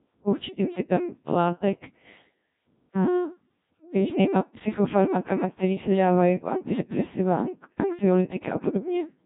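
From start to finish the speech has passed through the Codec 2 vocoder, at a very low rate consistent with about 1.3 kbit/s. The waveform itself is discarded; only pitch, voicing, energy and a coarse spectral envelope survive, and the decoder rebuilds the speech from sine waves. The damage is heavy: the result sounds robotic and buzzy, with a synthetic quality, and nothing remains above 3.7 kHz, leaving it dull and band-limited.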